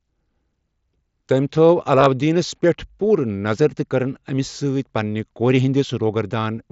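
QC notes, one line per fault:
1.99–2.07 s, concealed Bluetooth headset packet loss: short voice packets dropped between headset and phone, about 52 ms lost across 75 ms, longest gap 15 ms. The receiver patched each gap with a repeated best-matching recent waveform stretch, giving a brief buzzy roughness and slight warble.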